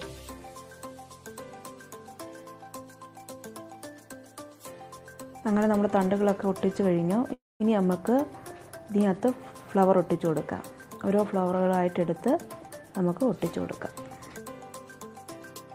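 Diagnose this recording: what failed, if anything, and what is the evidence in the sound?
At 7.33 s the sound stops and holds for about 0.29 s, to 7.62 s. It's a call audio freeze, and the network is the likely culprit: packets stalled, the jitter buffer drained, and the receiver stretched the last bit of sound before dropping to silence for around 200 ms. When the audio picks up again it continues right where it left off, so nothing's lost. You just get a gap, and the playout now runs about 0.27 s later.

From 12.29 s to 14.45 s you can hear a jitter buffer speed-up. The audio runs at roughly 112% speed with the pitch unchanged, so it sounds hurried without going chipmunky. That's the receiver catching up on the delay it built up. It trims short chunks a pitch period or so long, over and over, and across those two seconds it removes about 0.3 s in total. So this is a buffer-management stage, not a codec fault.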